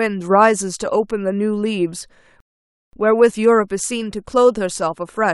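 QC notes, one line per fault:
2.40–2.93 s, rebuffering stall: the speech drops to dead silence for about half a second, then carries on from exactly the point where it broke off. The player ran short of downloaded audio and paused until more arrived, so nothing is lost, but 0.53 s is added.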